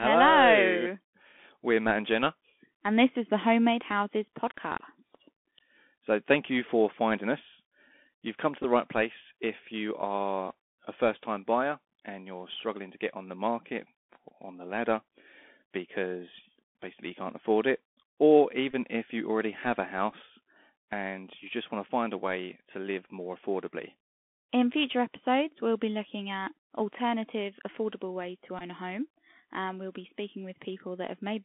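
Speech heard through a Bluetooth CVSD headset codec, band-limited to roughly 250 Hz to 3.5 kHz. Its one-bit, 64 kbps-style delta coding leaves a granular hiss under the voice, scratchy s sounds and distortion on loud high peaks where the adaptive step can't keep up. That hiss and slope distortion set it apart from a plain telephone band-limit. Brief Bluetooth headset packet repeats occur at 8.63 s, 18.71 to 18.74 s (between "can't afford it or" and "if you already have"), 20.12 s (after "you already have a") and 28.59 to 28.62 s (after "alternative affordable ways to"). Each lasts about 8 to 19 ms. Rather than dropping to silence as a packet loss would, the headset replays the previous packet, giving a short buzzy burst near 267 Hz.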